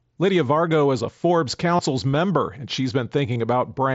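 Concealed Bluetooth headset packet loss occurs at 1.77 to 1.79 s and again at 3.34 s. Voice packets from the headset to the phone went missing, and the receiver filled each gap by repeating the closest-matching stretch of the preceding waveform. The first gap lasts about 22.5 ms, which fits three lost frames. The second lasts 15 ms, which fits two. Each is heard as a brief buzzy hold with a slight warble as the real sound resumes.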